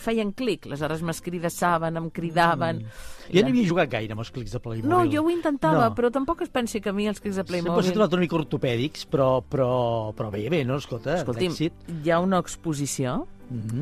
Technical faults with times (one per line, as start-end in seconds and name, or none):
3.36-3.41 hard clipping
3.69 compressed frames skipped